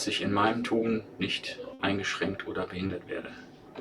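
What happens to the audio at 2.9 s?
At 2.87 s there is a short concealed packet loss, lasting until about 2.91 s. About 20 ms of audio failed to arrive in time. The receiver covered the gap with 20 ms of synthesized fill, extending the sound just before it. It then blended back into the real signal. The result is a brief smear or wobble in the sound. Because the gap is so short, it passes quickly.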